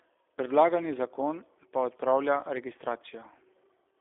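From start to finish the speech carries G.729 codec damage: a narrow 300 Hz to 3.6 kHz telephone band, with a rough, slightly synthetic texture. That fits an 8 kbit/s G.729A coder rebuilding each frame from a vocal tract filter, pitch predictor and a few pulses.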